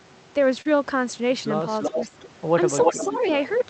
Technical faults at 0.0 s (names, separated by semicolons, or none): none